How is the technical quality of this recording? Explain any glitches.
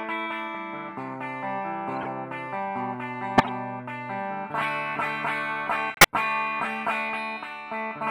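Three short glitches mar the recording, all of the same kind: a corrupt frame decoded. Bit errors damaged a few consecutive compressed frames, and the decoder played them anyway, so misread gains and codes placed energy at wrong frequencies. Each is heard as a brief chirpy burst of noise, at 2.01 to 2.07 s, 3.38 to 3.46 s and 5.94 to 6.06 s. The first peaks around -20 dBFS, and the later two are louder, around -10 dBFS.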